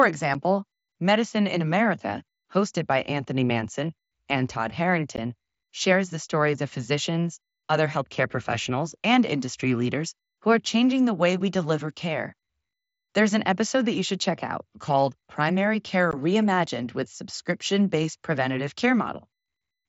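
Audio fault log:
0.34 s, 5.16 s, 16.11 s: unconcealed Bluetooth headset packet loss. The speech drops out in sharp-edged gaps of about 7.5 ms, then 15 ms twice, roughly one or two headset frames' worth, with nothing filled in, so each gap snaps shut.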